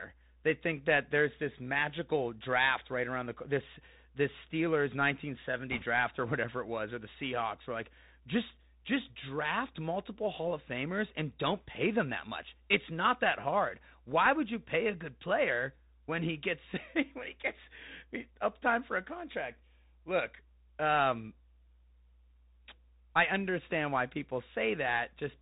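Right from the start the speech is squeezed through a Bluetooth CVSD headset codec, and it's plainly audible. Everything above 4 kHz is gone, so it has that boxy phone-call sound. The coder only sends an up-or-down step per sample, a one-bit stream that points to the 64 kbps headset rate, so s sounds come out scratchy and a fine granular hiss sits under the whole thing.

Then from 5.71 to 5.83 s, just before "or whatever it was", there's a short burst of bit errors on the Bluetooth voice link. Since each flipped bit only nudges the step slightly and the error fades out, you don't get a sharp click. Instead there's a quick rushing crackle over the speech, about what you'd expect from roughly one bit in a hundred going wrong.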